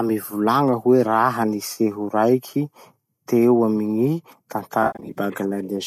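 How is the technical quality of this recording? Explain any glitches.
The recording has two dropouts from AAC frame loss with concealment, carried over a low-delay AAC link whose light graininess likely reflects AAC-ELD at a moderate bitrate such as 64 kbps.

At 1.73 to 1.78 s, about 30 ms of coded audio went missing, which fits roughly three short frames. The decoder patched the gap from the last good spectrum, leaving a brief smeared, phasey blip.

From 4.83 to 5.18 s, losses scattered across about 320 ms removed around 210 ms of audio, with the longest unbroken gap near 70 ms. The repeated concealment makes the sound smeared and noisy.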